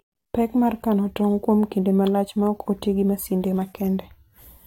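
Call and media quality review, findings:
Nothing to flag on this speech clip, no audible problems found anywhere in it, so no action needed.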